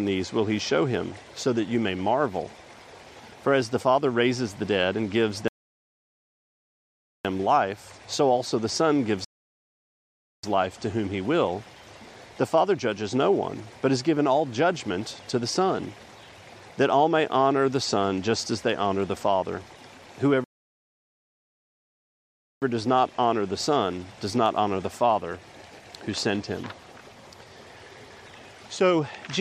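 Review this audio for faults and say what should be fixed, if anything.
Rebuffering stalls at 5.48–7.25 s, 9.25–10.43 s and 20.44–22.62 s add 1.77, 1.19 and 2.18 s of silence; the player emptied its buffer, then resumed exactly where it stopped. On a waveform these are flat-line gaps; on a spectrogram, blank vertical bands with no content lost either side. Prevent it by buffering more audio ahead before playback starts and by lowering the stream's bitrate when download throughput falls.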